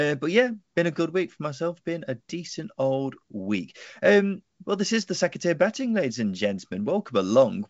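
Nothing stood out on listening to this speech clip, which carries the band limit of G.722 wideband telephone coding at 64 kbit/s, with nothing above 7.8 kHz.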